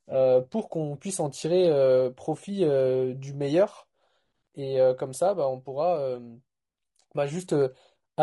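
Throughout the speech the voice sounds rough and grainy, with noise filling the gaps between harmonics and a thin, somewhat synthetic top band. This points to low-delay AAC compression, likely AAC-ELD at a bitrate around 32 kbps, whose short frames resolve pitch harmonics poorly.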